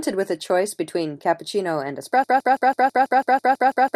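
From 2.24 s to the end, a broken-record loop replays one 164 ms slice eleven times, likely a stalled player; the repeats are identical, unlike stuttering.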